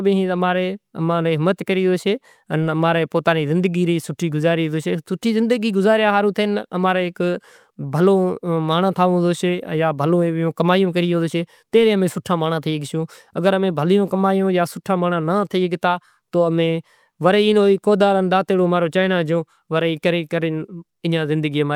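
No technical faults can be heard in the recording. Nothing at any point in the speech signals a problem in how the audio was captured, processed or delivered.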